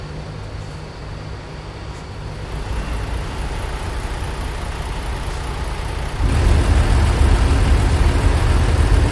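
No technical faults occur at any point in the audio.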